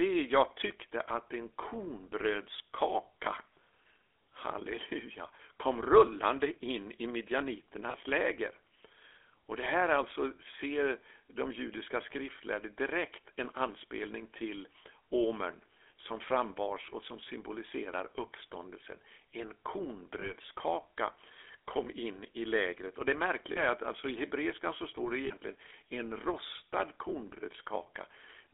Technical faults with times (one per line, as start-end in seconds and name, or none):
0.00-28.53 GSM full-rate codec
0.68-0.72 lost GSM frames
7.90-7.95 lost GSM frames
20.20-20.33 lost GSM frames
21.84-21.87 lost GSM frames
23.52-23.61 lost GSM frames
25.26-25.33 lost GSM frames